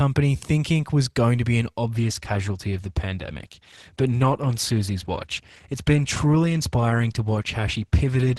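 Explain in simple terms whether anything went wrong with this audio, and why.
From about 1.91 seconds, just after "going to be an", the speech suddenly turns duller and more compressed-sounding, and it stays that way to the end. The crisp top end above roughly 12.4 kHz vanishes, with no gap or dropout at the switch. This is an adaptive stream at a lower bitrate: the connection slowed, so the player swapped to a smaller, more heavily compressed version of the audio that discards the finest detail to keep playing without interruption.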